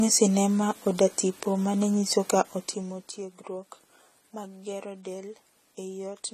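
Low-bitrate AAC compression is the likely cause of the damage running through the whole speech recording. Starved quantisation removes everything above 14 kHz and smears what remains, so the voice sounds dull and swirly, with fizzy sibilants that point to an AAC-LC stream near 32 kbps.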